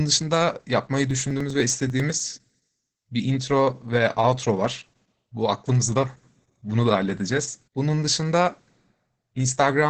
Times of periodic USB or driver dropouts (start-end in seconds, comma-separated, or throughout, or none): 1.11-2.89